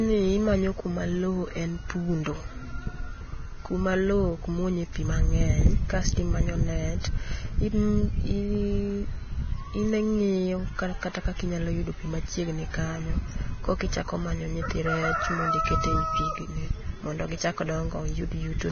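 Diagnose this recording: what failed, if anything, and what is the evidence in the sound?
The failure sits at the codec stage. Throughout the speech, the top end stops dead at about 6.5 kHz, with nothing above it. What remains of the treble sounds hissy and grainy, and consonant onsets lose their edges. The cause is likely heavy Vorbis compression, at a rate near 18 kbps. At that rate the encoder lowers its cut-off and quantises the upper residue so coarsely that fine detail is replaced by noise of similar energy.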